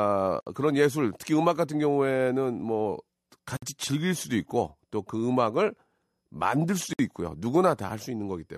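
Gap at a join of encoded pieces at 0.41, 3.57 and 6.93 s, each about 55 to 61 ms: separately encoded speech segments were joined untrimmed, so encoder delay and end padding open a silence before speech resumes.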